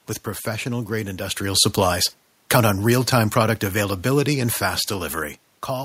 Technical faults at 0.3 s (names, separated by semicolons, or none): none